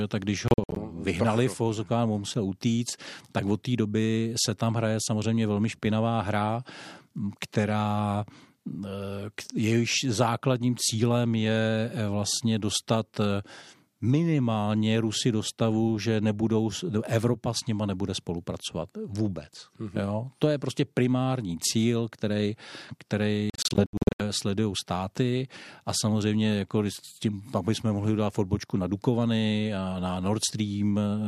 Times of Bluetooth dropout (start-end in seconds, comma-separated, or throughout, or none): 0.48-0.79, 23.50-24.22